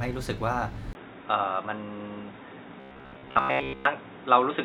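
At 0.93 s a gap of about 20 ms opens, and from there to the end the sound turns dull and boxy, with a narrower band. The input was likely switched to a poorer device. The level stays roughly unchanged, with a faint new noise floor far below the signal. A spectrogram shows a lower flat ceiling after a thin vertical gap.

From 2.80 to 3.85 s comes a rigid, metallic buzz at 66.7 Hz: robotic sound, likely from repeated short buffers. Most of the audio is replaced by loops of a segment of about 15 ms. The waveform shows identical repeating blocks, and the spectrogram shows evenly spaced horizontal harmonic lines.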